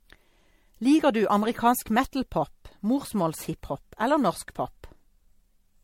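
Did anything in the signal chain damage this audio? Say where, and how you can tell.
Yes, at the codec stage, and across the whole speech clip: the sound has a swirly, hollow, smeared quality with soft consonant attacks, which is generation loss, likely from MP3 re-encoding repeated around four times at a rate that fits 64 kbit/s. Each pass quantises on a shifted frame grid, so errors accumulate. On a spectrogram, expect a hard ceiling with nothing above 16.5 kHz, patchy holes and smeared onsets; the waveform shows blurred transients.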